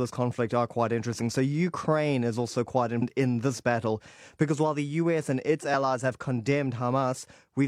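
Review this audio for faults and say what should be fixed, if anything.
Damaged data in a compressed stream: part of the compressed speech was corrupted between 2.98 and 3.03 s, just after "is also quite" and before "in this battle because". The decoder cannot read the frames there, so it loses sync and hunts for the next valid frame header. That leaves a short glitch about 50 ms long. To prevent it, carry and store the stream with checksums or error correction so corrupted frames are caught and resent before decoding.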